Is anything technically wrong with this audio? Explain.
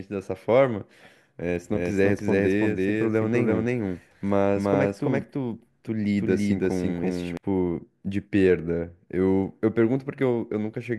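Yes. From 1.75 s to 7.37 s there is a doubled audio track: a full-band second copy of the speech trails roughly 300 ms behind at about the same level, likely from a second, slower capture path. It switches on and off abruptly, with no decay. On a waveform or spectrogram, every syllable's pattern repeats shifted right.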